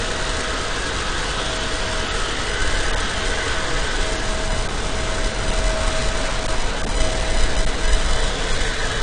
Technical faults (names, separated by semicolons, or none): AAC compression